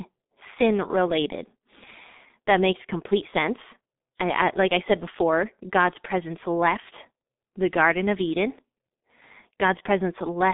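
Speech runs through G.723.1 codec damage from start to finish, heavy enough to sound muffled and hoarse, with consonants smeared into one another. The narrow line band of about 200 Hz to 3.7 kHz and the slow 30 ms frame updates, which fit a 6.3 kbit/s mode, cause this. A spectrogram shows a hard ceiling with nothing above 3.8 kHz, little below 200 Hz, and blocky, time-smeared harmonics instead of crisp onsets.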